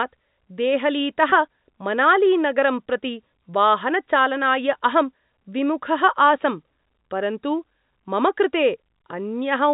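At 1.30 to 1.32 s, just before "मनालीनगरं प्रति वाहनचालनाय", there is packet loss with pitch repetition: a 20 ms stretch, which fits one lost packet, went missing, and the receiver filled it by repeating the last pitch period. Because the gap is this short, it is heard as a brief, slightly buzzy hold on the voice rather than a silent dropout or click, and the speech resumes without a break. The band-limiting of the G.711 telephone coding is heard throughout.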